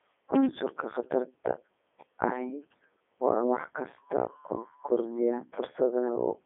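Speech running through the Codec 2 vocoder for the whole clip, heavily damaged. The decoder rebuilds the voice from sine waves using only pitch, voicing and envelope, so it sounds robotic and buzzy. Band limits of 300 Hz to 3.5 kHz and nothing above 3.7 kHz fit its 3.2 kbit/s mode.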